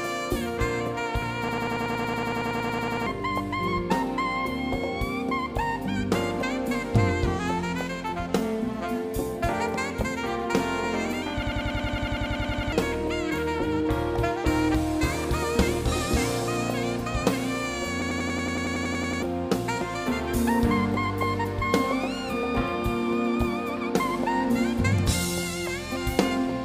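At 1.49 s the audio seizes into a system hang loop: one 92.9 ms slice repeats at about 10.8 times a second until 3.07 s, a hard machine-gun stutter. The machine stalled while the sound hardware kept replaying its ring buffer, which fits a 4096-sample buffer, and roughly a second and a half of audio never arrives. The same lockup returns from 11.42 to 12.73 s and again from 18.02 to 19.23 s, where about a second goes missing.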